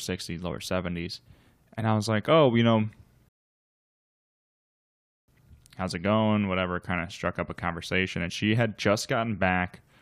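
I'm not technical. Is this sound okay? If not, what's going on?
No. There is a rebuffering stall from 3.29 to 5.28 seconds. The player ran out of downloaded audio, so the speech cuts to silence for about two seconds, then picks up exactly where it stopped. Nothing is missing, but the clip runs two seconds longer.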